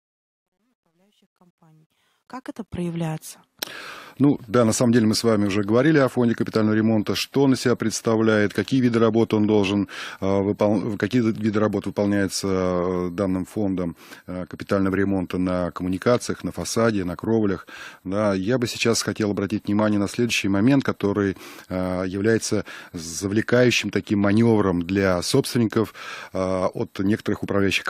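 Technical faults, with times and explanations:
0.00–3.10 s, truncation distortion on a fade: the gain stage handling the fade-in keeps too few bits and adds no dither, which fits a word length of around 11 bits, so the quietest part of the rise is rendered in a handful of coarse square steps. The opening 1.89 s is worst and gritty, and the roughness eases as the fade climbs to full level at 3.1 s.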